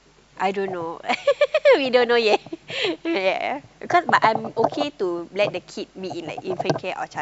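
Listening closely to the speech, nothing stood out as a technical fault at any point.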